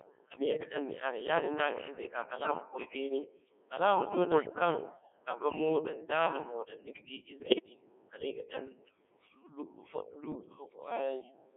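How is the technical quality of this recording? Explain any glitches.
The recording quality is poor. The speech has passed through a very low-rate digital vocoder and then suffered transmission errors.

Codec 2 vocoder damage runs through the whole clip. The decoder rebuilds the speech from pitch, voicing, level and a rough spectral shape, so the original waveform is lost. The heavy robotic buzz fits a rate of about 1.6 kbit/s. The band is limited to roughly 300 Hz to 3.4 kHz.

Bit errors on digital voice radio occur at 0.45–0.74 s, 2.36–2.51 s, 4.32–4.50 s, 7.40–7.69 s (just before "kala i") and 10.32–10.50 s. A few percent of bits were flipped. Each bad bit corrupts a whole frame's pitch, level or spectrum. The speech jumps, warbles and turns into bleeping gibberish.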